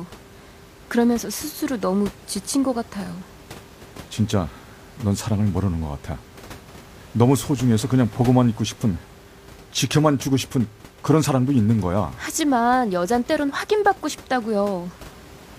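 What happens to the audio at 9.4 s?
At 9.4 s the audio is intact, with only the room noise, about 22 dB below the speech, continuing underneath.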